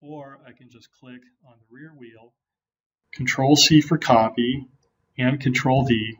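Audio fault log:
0.00–3.04 s, one channel inverted: the sound falls by about 26 dB to a faint remnant, then recovers. The waveform shrinks to a near-flat trace. Likely cause: one stereo channel's polarity reversed, cancelling shared content in mono.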